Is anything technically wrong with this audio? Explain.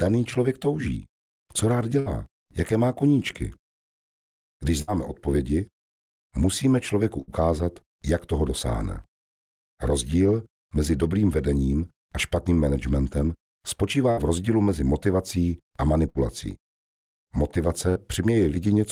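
Yes. Six times the sound briefly stalls into a short held buzz or fading hiss and then jumps ahead: at 1.99–2.09 s, 4.82–4.91 s, 7.22–7.30 s, 14.11–14.20 s, 16.09–16.18 s and 17.89–17.98 s. Each is a burst of packet loss. A run of packets went missing, so the receiver stretched the last sound it had for roughly 60 ms while fading it. When the stream returned, about 60 ms of the sound was skipped entirely.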